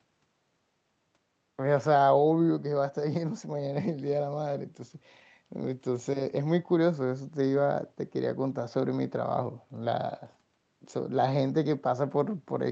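The clip is speech, and nothing is technically wrong with it.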